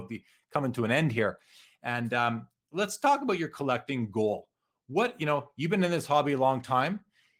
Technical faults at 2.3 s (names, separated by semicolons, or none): none